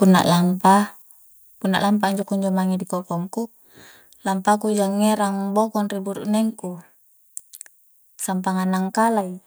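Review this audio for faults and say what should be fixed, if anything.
At 1.02 s the speech and the background drop in level together, suddenly, by about 5 dB. The change happens in a single step, not a gradual fade. This is a microphone volume stepped down. The likely cause is the call software judging the input too loud and lowering the device's input volume. Voice and room sound fall by the same amount, so the change sits at the input itself. To prevent it, set the microphone level sensibly beforehand and disable automatic input volume adjustment in the call software.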